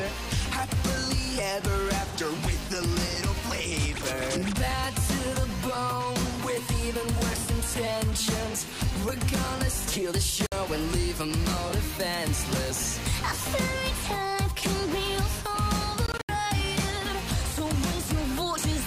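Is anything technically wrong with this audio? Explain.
Yes. There are two gaps in the sound that are likely Bluetooth dropouts. At 10.46 s the output goes silent for about 56 ms, the length of a few lost packets. From 16.06 to 16.29 s several short holes are scattered over about 224 ms, the longest about 75 ms, together roughly 131 ms. After each gap the audio resumes later in its timeline, as if it had kept playing, rather than picking up where it stopped as a stall would.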